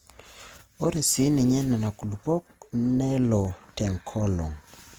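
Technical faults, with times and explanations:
Throughout: Opus compression. The speech has a rough, grainy texture rather than swirly gaps, which is likely Opus in its music mode filling starved bands with folded or noise content. Bandwidth stays full, and the damage fits a low bitrate around 24 kbps.
0.96 s, 1.87 s, 3.45 s: dropped samples. Each is a single sharp click, a thin vertical line across the spectrum. The likely cause is a fraction of a millisecond of samples going missing, so the waveform jumps straight to a later value.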